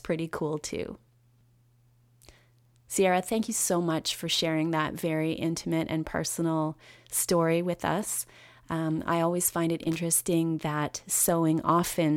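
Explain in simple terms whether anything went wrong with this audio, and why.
Something did go wrong: right after "I always find it", from about 9.83 to 9.96 s, there's a short, scratchy burst of loose connector crackle. A worn or dirty plug contact was flickering on and off, chopping the speech into rapid crackles.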